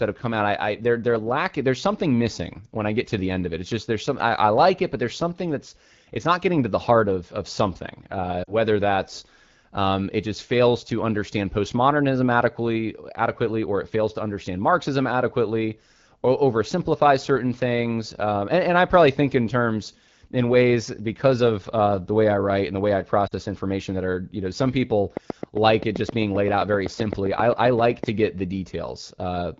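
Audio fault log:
8.43–8.54 s and 23.27–23.33 s: lost AMR speech frames. About 40 ms of speech is concealed by repeating the last pitch and vocal tract settings with falling gain. On the spectrogram the harmonics smear briefly and then dim.
25.17–28.05 s: train of clicks. About 20 evenly spaced pops at 7.68 per second, peaking roughly 10 dB above the speech, likely from interference by nearby equipment. They appear as thin vertical spikes on the waveform and spectrogram.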